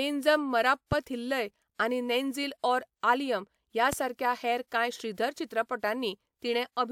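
A loud pop hits at 0.92 to 0.95 s, and a louder one at 3.93 to 3.95 s. Speech continues underneath. A sudden voltage spike is the likely cause.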